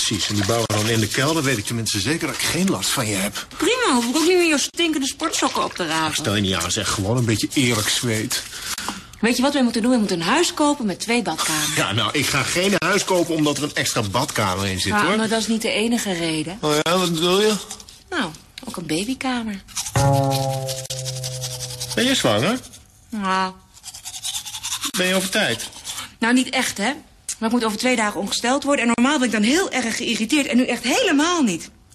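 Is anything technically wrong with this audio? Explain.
Yes. A gap at a join of encoded pieces occurs at 0.66, 4.70, 8.74, 12.78, 16.82, 20.86, 24.90 and 28.94 s, every 4 s. Separately encoded sections were joined with each run's start delay and final-frame padding left in. The result is a silence of about 40 ms with smeared edges, after which the sound resumes where it stopped.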